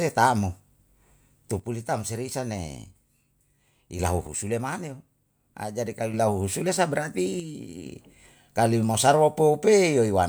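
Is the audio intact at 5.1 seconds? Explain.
No, 5.1 seconds falls inside a stretch from 4.27 to 6.14 s where the speech suddenly drops by about 6 dB and then snaps back. That's most likely one channel dropping out: with one stereo side gone, the mono sum carries only half the shared signal.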